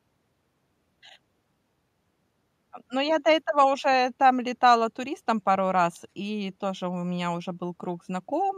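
No technical faults can be heard anywhere in this recording.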